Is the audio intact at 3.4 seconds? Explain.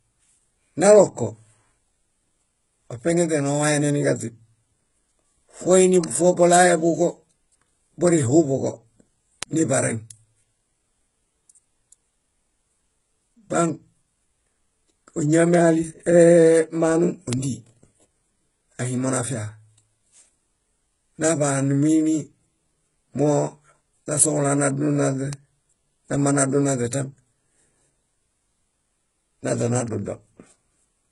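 No. At 3.40 s a bit error spike cuts through the signal. A single bit flipped in memory or on a digital link, corrupting three consecutive samples: their values jump by a power of two and then snap back. That produces one sharp tick, broadband and unrelated to the speech around it, lasting only those few samples before the waveform returns to its proper course.

The same moment also carries heavy codec damage that runs through the whole clip. Nothing reaches above 11.1 kHz, and the treble below that limit sounds synthesized rather than captured. This is likely HE-AAC compression, at a rate that fits roughly 12 kbps. Only the lower band is coded, and spectral band replication copies those bands upward under a coarse envelope. Harmonics therefore fail to line up across the crossover, and s sounds come out gritty, metallic or lispy.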